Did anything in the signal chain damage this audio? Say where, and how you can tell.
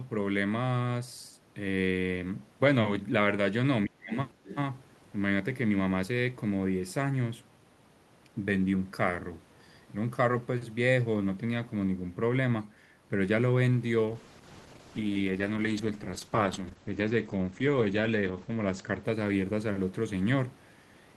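Yes. In the call processing stage, the speech dips sharply from 3.86 to 4.15 s, falling by roughly 35 dB at its deepest across about 0.3 s. This is speech suppressed in double talk, likely because the echo canceller could not separate the local talker from loudspeaker echo while both sides spoke, so it attenuated everything. On a waveform the envelope pinches to near silence mid-phrase. A spectrogram shows a brief gap or a fading band.

Also in call processing, from 4.45 to 4.56 s the other side's voice leaks through. It is a brief foreign fragment sitting roughly 15 dB below the main speech. The echo canceller likely left residual loudspeaker pickup in the microphone path. A spectrogram shows a faint, separate harmonic pattern that does not line up with the talker's pitch track. On the waveform it is a small burst of low-level energy.

At the codec and network stage, a call bitrate drop begins at 14.09 s and runs to 20.05 s. 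The sound turns rough and muffled and is worst for about 4.4 s. The change fits the encoder being told to fall from about 48 kbps to around 11 kbps. Coding becomes coarse and the audio band shrinks from 20 kHz to 8 kHz. A spectrogram shows a flat ceiling at 8 kHz with smeared, blotchy detail below it.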